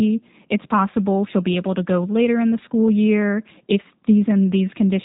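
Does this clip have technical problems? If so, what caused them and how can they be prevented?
Yes. Throughout the speech, the sound is rough and faintly synthetic, and everything above about 3.8 kHz is gone, giving a narrow telephone quality with plainly audible coding damage. This is the G.729 codec, and the sound points to its 8 kbit/s G.729A form. It rebuilds speech from a vocal tract filter, a pitch predictor and a few pulses per 10 ms frame, so fine detail is lost. Prevent it by recording or transmitting with a wideband codec such as Opus at a higher bitrate.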